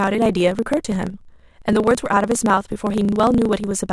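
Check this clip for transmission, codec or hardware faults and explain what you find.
The speech carries a block size mismatch (truncated) fault that runs throughout. One stage writes longer blocks than the next stage reads, so the tail of every block is discarded. That produces a steady buzz at about 27.2 Hz, which fits a 1024-sample block. The speech moves 1.16 times too fast but keeps roughly its normal pitch. On a waveform, small discontinuities recur at that rate. A spectrogram shows vertical lines about 37 ms apart across all frequencies.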